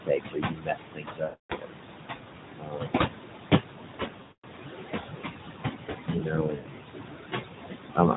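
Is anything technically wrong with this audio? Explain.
Yes. The speech carries three kinds of fault.

Noise suppressor artifacts run through the whole clip. The room noise sits only about 2 dB below the speech, and the suppressor pulls it down by about 20 dB band by band. The residue sinks between phrases and rises under the words.

Speech cut by the noise suppressor occurs at 0.00–1.78 s (dropping by as much as about 22 dB, over roughly one and a half seconds of it), 2.59–3.28 s (about 21 dB), 6.06–6.79 s (about 21 dB) and 7.95–8.17 s (about 16 dB, briefly). The suppressor mistook speech energy for noise, so soft consonants and word endings sound swallowed or faint.

Lost AMR speech frames occur at 1.24–1.53 s, 4.22–4.45 s and 6.56–6.67 s. These gaps of about 260, 220 and 100 ms fit runs of 13, 11 and 5 corrupted 20 ms frames. The AMR narrowband decoder repeats its last good pitch and vocal tract settings at falling gain. 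The sound smears, fades toward silence within a couple of tenths of a second, then resumes rough and weak.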